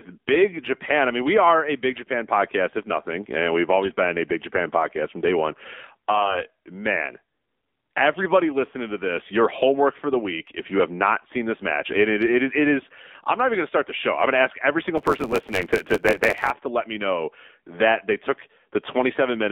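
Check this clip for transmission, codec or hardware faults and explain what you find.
Three kinds of fault are present in this speech clip.

Throughout, the AMR narrowband mobile codec at 7.4 kbps confines the speech to about 250 Hz to 3.6 kHz, giving a buzzy, synthetic character from its pulse-driven vocal-tract model.

AMR bit errors occur at 3.82 to 3.98 s, after "if nothing and we've", and at 6.14 to 6.41 s, after "podcast from day one". Flipped low-priority bits misplace excitation pulses and skew gain and spectral values, so the speech turns hoarse and gargly at roughly steady pitch.

A block size mismatch (truncated) runs from 14.97 to 16.52 s, between "going to ask every" and "to let me know". The tail of each written block is dropped, which fits 512-sample blocks. This produces a 91.9 Hz buzz and plays the audio 1.07 times faster.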